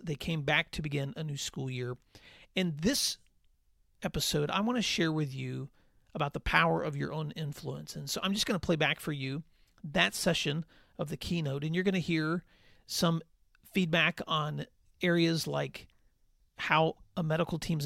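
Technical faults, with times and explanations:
Nothing technical stood out on listening to this speech.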